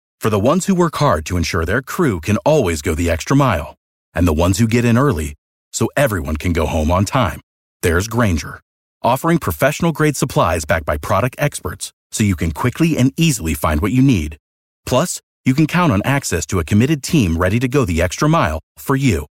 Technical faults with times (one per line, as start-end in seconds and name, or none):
none